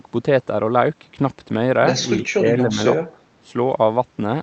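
From 2.33 to 2.78 s the speech dips by roughly 15 dB, losing level in patches totalling around a third of a second. This is likely speech suppressed in double talk: the echo canceller, unable to separate this talker from loudspeaker echo, turned both down. The sound ducks unevenly, beneath an 8 kHz ceiling from the Opus call path.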